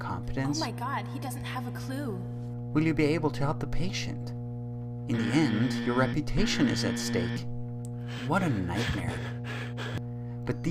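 A steady low tone at 60 Hz runs through the whole clip, sitting only a few decibels below the sound itself and nearly as loud. This is mains hum: a ground loop or nearby transformer is coupling the power-line frequency into the signal path.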